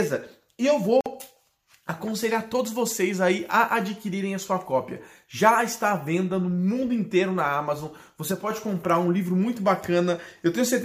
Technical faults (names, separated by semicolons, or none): gap at a join of encoded pieces; sudden gain jump